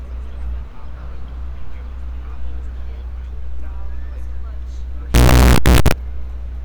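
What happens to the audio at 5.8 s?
At 5.8 s the sound is inside a burst of very loud, harsh distortion running from about 5.14 s to 5.92 s, in which quiet moments blare as loudly as everything else. The likely cause is signed and unsigned mixed up: with the top bit flipped, which fits 16-bit samples, each zero crossing jumps across the full range. The waveform shows a solid slab of large swings, and the spectrogram fills with dense broadband energy across that span.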